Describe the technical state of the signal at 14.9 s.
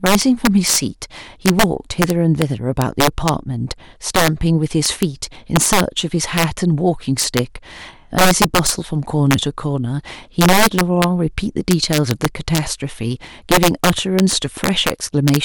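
At 14.9 s the speech is still suffering from integer overflow, present across the whole clip. Gain pushes the signal about 11 dB beyond the largest value the integer format can hold, and instead of being limited, those samples wrap around to the opposite extreme. Around one in a hundred samples crosses that line, so each loud peak snaps across the full range, producing harsh, violent cracks far sharper than ordinary clipping.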